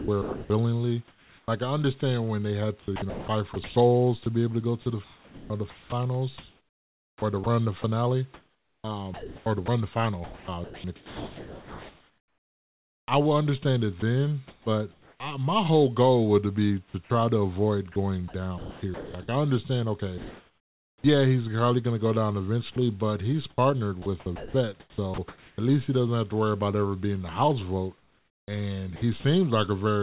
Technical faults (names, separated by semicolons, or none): sound chopped by the voice detector